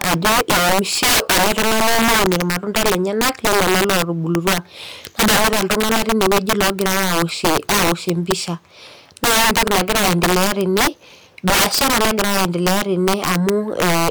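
From start to finish the speech suffers integer overflow: the signal was driven about 16 dB past full scale, and instead of being limited, every peak over the limit wrapped to the opposite extreme. Only a small share of samples, roughly seven percent, cross that line, but each one produces a harsh, violent crack on the louder syllables, far sharper than ordinary clipping. On a waveform the peaks jump abruptly from top to bottom rail; a spectrogram shows bright full-height vertical streaks.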